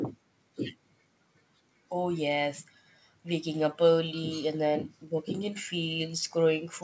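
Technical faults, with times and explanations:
Nothing stood out on listening to this speech recording, which has passed through call microphone processing and a call path with a G.722 codec, so both leave nothing above 8 kHz.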